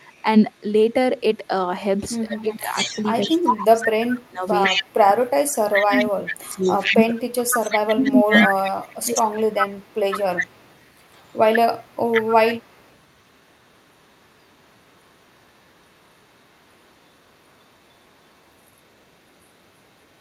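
An echo leak appears first from 0.19 to 0.6 s: a faint copy of the speech, about 40 dB down, trailing 149 ms behind. The likely cause is a far-end speakerphone whose echo canceller let its microphone pickup slip back. On a spectrogram it shows as a weak duplicate of the harmonic pattern, shifted right by 149 ms.

From 2.27 to 4.75 s, speech suppressed in double talk begins. With both sides talking, the canceller likely mistook the local talker for echo and attenuated everything. Over roughly a second and a half the level drops by up to about 25 dB, sounding like dips and broken-off syllables. The waveform shows sudden notches in the envelope. At the same time, from 2.35 to 5.09 s, the echo leak returns far stronger, only about 5 dB below the speech, and is heard as a doubled voice.

Suppression strikes again from 5.1 to 5.49 s, briefly cutting the level by about 30 dB. Strong echo follows from 5.47 to 6.12 s. 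From 5.85 to 9.42 s a longer suppression stretch chops roughly three seconds of speech by up to about 25 dB, overlapping loud echo from 6.52 to 11.39 s. From 11.77 s to the end, the echo sinks back to a faint trace about 40 dB down.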